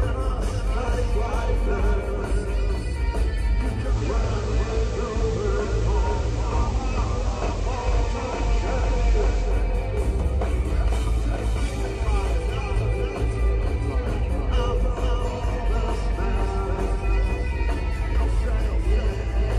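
Throughout, a doubled audio track trails about half a second behind, roughly 5 dB quieter, likely a second capture path; waveforms show every transient repeated, undecayed. From 3.81 to 9.58 s, digital radio blending to analogue FM brings hiss about 25 dB down, with 167 ms cross-fades and unchanged level.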